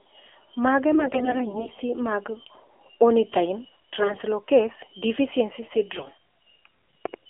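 The speech runs through the AMR narrowband mobile codec from start to finish. Everything sits within a 300 Hz to 3.4 kHz line band, and the plainly buzzy, synthetic texture points to a low rate near 7.4 kbps, where too few pulses drive the vocal-tract model.

AMR bit errors occur from 0.94 to 1.71 s, from 3.99 to 4.23 s and from 5.96 to 6.11 s. Flipped low-priority bits misplace the excitation pulses and skew the pitch, gain and spectral values. Pitch and level hold, but the voice turns hoarse, scratchy and gargly, most heavily in the last burst.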